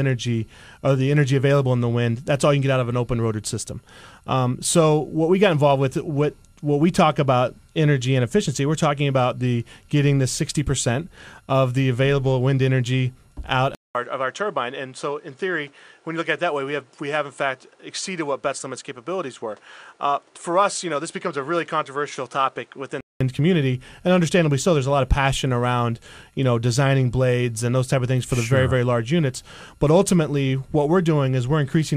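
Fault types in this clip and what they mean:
Input switched to a poorer device: from 13.7 to 23.2 s the sound cuts out for 200 ms, then returns duller, with nothing above 10.5 kHz, about 5 dB quieter and over a new faint noise floor, likely from capture moving to a lesser microphone.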